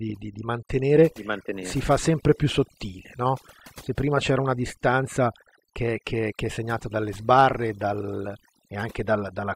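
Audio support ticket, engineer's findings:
Overdone noise removal throughout the speech. Background between phrases collapses to near silence, with twinkling specks scattered across it. Probable component: noise reduction stage, set too strong on a noisy source. Mechanism: the tool pushes individual frequency bands far down or off wherever they sit close to its noise estimate. Quieter parts of the voice fall into that range and get removed with the noise.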